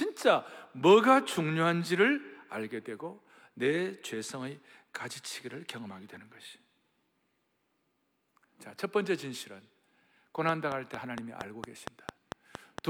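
From 10.49 to 12.79 s, a train of clicks ticks at a regular 4.4 per second, about ten sharp pulses standing well above the speech. The likely cause is nearby interference. Each click shows as a thin vertical line on the spectrogram and a narrow spike on the waveform.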